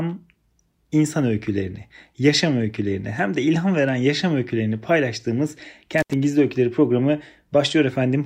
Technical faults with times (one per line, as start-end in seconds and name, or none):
5.98-6.14 intermittent contact